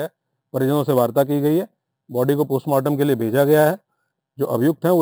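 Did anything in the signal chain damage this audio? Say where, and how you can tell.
Yes. Imaging from sample-and-hold upsampling runs throughout the clip, introduced at the sample-rate conversion stage. A bright, metallic fizz rides on the sound and rises and falls with its level. The lowest mirrored band sits between 6 and 12 kHz, about 23 dB below the signal, and moves opposite to the pitch. That fits audio at a 12 kHz rate raised to 44.1 kHz by repeating each sample without an anti-imaging filter, so spectral copies fold around multiples of the old rate.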